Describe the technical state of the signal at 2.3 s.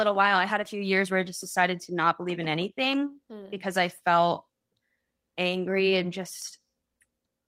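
At 2.3 s the speech signal is intact, with no audible fault at that moment.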